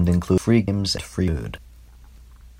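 The audio was most likely being handled in half-second chunks, and roughly a fifth of a second was dropped at each handover, with the surrounding speech butted together without any gap. This audio missing between chunks produces abrupt skips at 0.38, 0.68, 0.98, 1.28, 1.58, 1.88 and 2.18 s, evenly spaced 0.3 s apart, so the speech lurches forward in a steady rhythm, with pieces of sound cut out at each join.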